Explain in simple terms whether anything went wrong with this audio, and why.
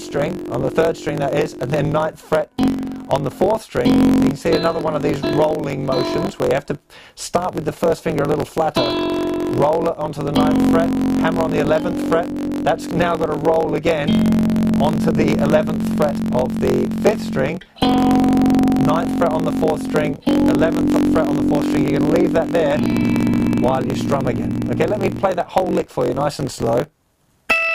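Something did go wrong, and it lasts from start to finish. A low buzz runs under all of the audio, pulsing about 46 times a second. The sound also plays about 7% too fast, yet the pitch stays close to normal. This is a block size mismatch (truncated). One stage passes the audio along in chunks, which fits 1024-sample blocks, and the next stage takes less than that. The tail of every chunk gets dropped. Those regular gaps make the buzz, and losing them speeds things up.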